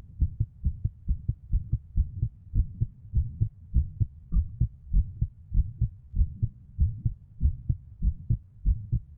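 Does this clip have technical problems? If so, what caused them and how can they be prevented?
Yes. From 1.98 s to 9.17 s, a time-stretched section likely slows the audio to 0.74x by repeating short pieces to keep pitch, so the pace drops abruptly and drags. Prevent it by trimming, editing or re-recording to the required length instead of stretching.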